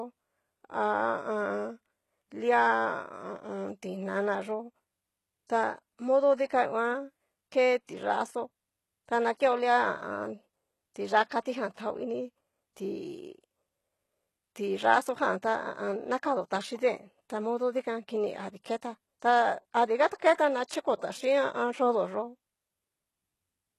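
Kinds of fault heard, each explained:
HE-AAC compression: The top end sounds rebuilt rather than recorded, with nothing above about 12.3 kHz and gritty, metallic sibilance. It's likely HE-AAC copying lower bands upward to fake the treble, and the damage is plain enough to fit a bitrate near 16 kbps.
pre-echo: At 20.34 s a hiss of about 41 ms creeps in just before a sharp attack, which then lands soft and smeared. The codec spread its noise across the whole block, so the quiet moment ahead of the hit got filled too.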